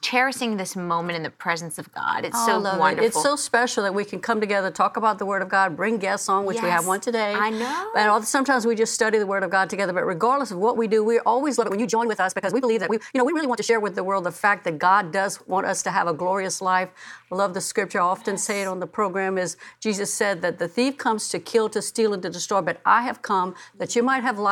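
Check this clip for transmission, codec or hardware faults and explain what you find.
One fault stands out. From 11.54 to 13.76 s there is a time-stretched section. The sound suddenly runs about 1.93 times faster with unchanged pitch. It is likely software squeezing audio by dropping short pieces. The result sounds rushed.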